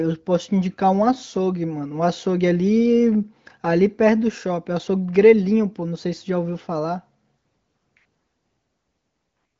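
No technical faults are audible in this speech, and its bandwidth ends at about 7.4 kHz, which fits an AMR wideband (HD Voice) path at one of its higher rates, where coding leaves at most a faint trace.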